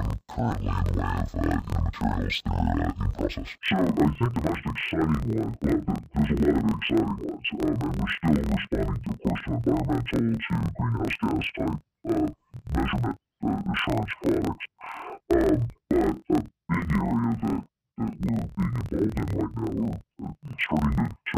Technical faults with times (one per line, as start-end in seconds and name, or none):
0.00-21.37 interleaved audio read as planar